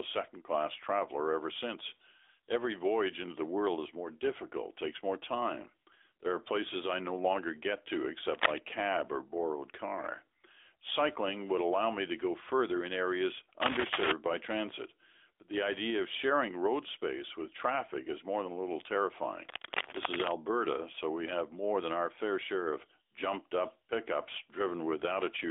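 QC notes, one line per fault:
Throughout: AMR narrowband mobile codec. The speech passes through AMR-NB at 10.2 kbps over a 300 Hz to 3.5 kHz line, so nothing reaches above 3.7 kHz. The vocal-tract model at this bitrate leaves a plainly buzzy, synthetic edge, and a spectrogram shows a hard ceiling with empty bands above.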